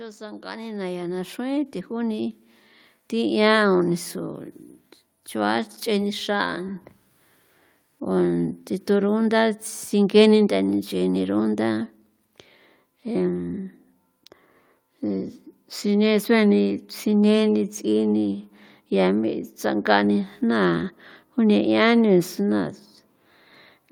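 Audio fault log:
0.19–6.73 s automatic gain rising: the gain control judged the input too quiet and lifted it steadily by about 12 dB, so the voice and background noise swell together; the waveform envelope widens as a slow ramp, and the spectrogram brightens uniformly across all frequencies.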